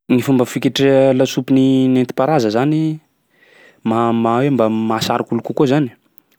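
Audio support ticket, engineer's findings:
No faults found in the speech recording. Nothing heard points to a component needing follow-up.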